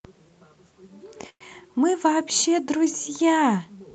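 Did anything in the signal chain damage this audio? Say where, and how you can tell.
Yes. There is a call audio freeze from 1.29 to 1.43 s, likely caused by packets stalling on the network so the jitter buffer ran dry. The last sound stretches into a fading buzz or hiss, then 70 ms of silence. Playback resumes where it stopped, with nothing missing but 111 ms late.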